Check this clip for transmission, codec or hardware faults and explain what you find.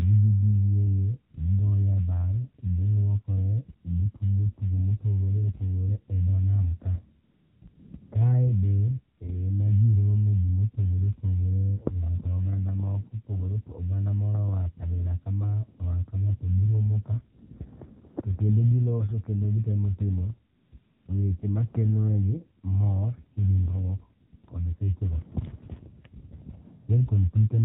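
Yes, there are two faults here, both from a mobile call path.

The whole clip has been through the AMR narrowband mobile codec, at a rate that fits the 7.4 kbps mode. At 8 kHz sampling nothing above 4 kHz survives, and the voice is rebuilt from a vocal-tract model driven by a few pulses. At this low rate that leaves the speech plainly buzzy and synthetic.

There's also AMR comfort noise, eleven times between 7.2 and 26.9 s, mostly bunched around 7.2–8.1 s, 20.6–21.1 s and 24.3–24.5 s. The gaps run from 20 ms up to 380 ms. The phone decided nobody was talking and stopped sending speech frames, so the receiver filled the gap with synthetic noise. You hear that as a smooth, steady hiss that switches in and out.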